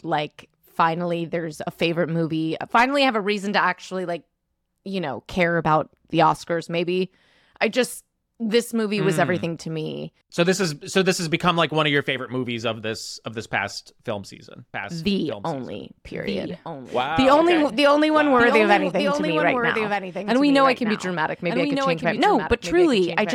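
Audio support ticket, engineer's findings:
Doubled audio track from 14.74 s, right after "this past film season", to end. Speech heard twice: full-band copy about 5 dB down, trailing by about a second, dry, no room tail, starts abruptly. Likely cause: second capture path or misaligned edit layering a delayed duplicate.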